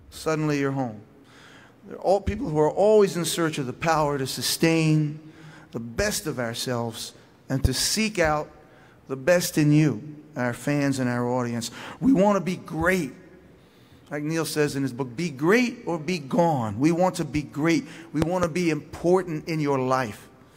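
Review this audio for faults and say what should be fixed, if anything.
Loud pops occur at 7.65 to 7.68 s, a single sharp hit roughly 15 dB above the surrounding sound, and at 18.22 to 18.47 s, a pair roughly 20 dB above it. The sound carries on underneath both. Each is likely a voltage pulse from a plug, switch, static discharge or driver glitch. To prevent this, connect and switch equipment before recording starts and keep cables and grounding secure.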